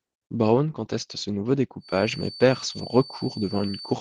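From the start, the speech sounds muffled and slightly hoarse, with a faintly robotic edge. This is Opus voice compression damage, plainly audible throughout. The codec appears to be in its hybrid mode, where a linear-prediction coder handles the band up to 8 kHz and a transform layer handles the air above it. At a rate that fits around 16 kbps, both layers are starved of bits, so the excitation is coarsely coded and the top end loses detail.

At 1.79 s a thin, steady whistle at 4.5 kHz appears behind the speech and continues to the end. It sits well below the speech level, swelling and fading slowly in loudness without building up. This is a feedback whistle. The likely cause is a loudspeaker-to-microphone loop held just at the edge of feedback, which lets that single frequency ring on continuously without running away into a howl.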